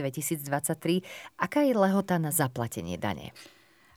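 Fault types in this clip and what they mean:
Low bit depth without dither: Grainy, signal-dependent distortion runs through the whole speech clip, turning rough on quiet passages and decays and sitting roughly 45 dB below the signal. The likely cause is truncation to about 10 bits with no dither, which leaves the rounding error tracking the waveform.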